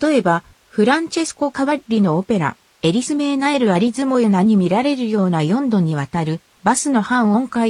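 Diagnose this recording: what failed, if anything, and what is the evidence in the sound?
Nothing failed here as far as I can hear; there's no point in the recording where any stage of the chain gives itself away.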